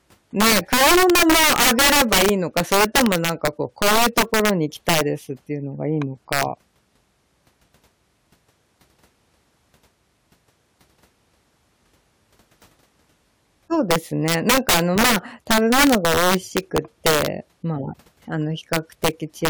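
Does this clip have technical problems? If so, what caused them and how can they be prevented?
Yes. Integer overflow: the gain or mixing stage let samples exceed the largest integer value, and they wrapped to the opposite sign instead of being limited. Each overloaded peak in the speech flips across the full range, producing violent cracks far harsher than clipping, at 0.40–4.50 s (about 14 dB over), 4.89–5.01 s, 6.33–6.43 s, 13.91–17.26 s (about 11 dB over), 18.73–19.08 s and 19.45–19.49 s. Using saturating arithmetic or a limiter before integer conversion prevents this.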